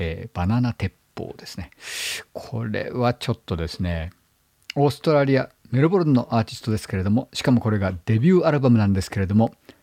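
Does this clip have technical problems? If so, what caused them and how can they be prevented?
No, no technical problems here.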